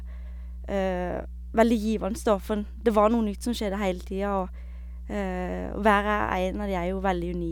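A steady low drone at 60 Hz sits under the speech from start to finish, fairly prominent at only about 10 dB below the talker. This is mains hum: the power line has coupled into the signal, most plausibly through a ground loop or a nearby transformer.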